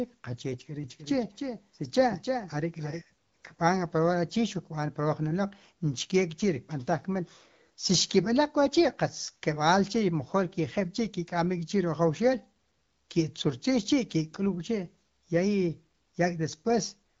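From 0.84 to 3.02 s, a doubled audio track, likely from a slower capture path, adds an abrupt dry copy about 5 dB quieter, trailing roughly 300 ms.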